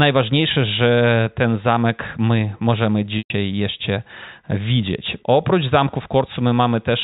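Packet loss with pitch repetition at 3.18 to 3.30 s: about 120 ms went missing, so the last pitch period repeats briefly, fades to silence, then speech cross-fades back.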